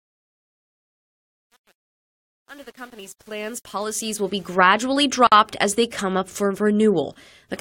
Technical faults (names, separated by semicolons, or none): truncation distortion on a fade; gap at a join of encoded pieces